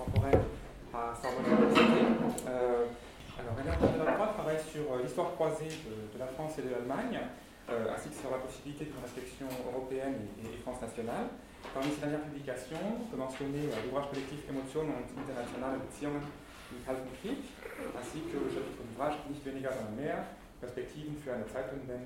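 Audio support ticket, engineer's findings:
No faults found in the audio; findings for this ticket are clear.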